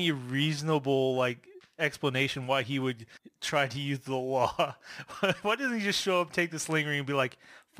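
Throughout the speech there is crude rate conversion. Samples were dropped or repeated rather than filtered, which fits a 48 kHz to 44.1 kHz change. The errors recur in a fixed pattern. They leave a gritty, inharmonic fizz roughly 25 dB down, trailing loud and bright sounds.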